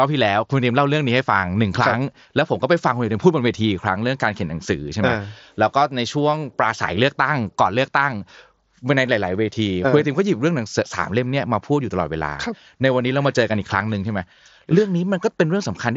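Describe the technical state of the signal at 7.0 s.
At 7.0 s the speech is intact, with no fault at that moment; it passes through a Bluetooth mSBC headset link working as that codec normally does.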